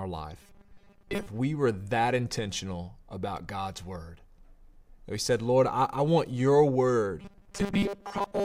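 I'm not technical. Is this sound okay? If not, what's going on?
No. Twice the speech turns into a robotic sound from repeated short buffers: from 0.42 to 1.28 s, just before "we were that intentional", and from 7.22 to 8.45 s, right after "I I want your". It's likely that new audio was arriving too slowly, so the playback kept looping tiny 5 ms slices and skipped most of the real sound. That loop forces a steady 200 Hz metallic buzz. Unlike a dropout, the sound never goes silent.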